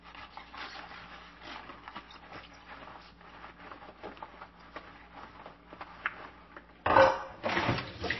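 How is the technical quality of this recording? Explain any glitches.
The recording is noticeably degraded by lossy coding for its whole length. The damage is plainly audible: nothing is present above 5.8 kHz, and the sound has a watery, swirling quality. This is likely MP3 compression at a low bitrate, around 24 kbps. Short of bits, the encoder cuts the treble at a fixed point and drops weak frequency lines, which flicker on and off from frame to frame. That causes the dull top end, the swirl, and the smeared attacks.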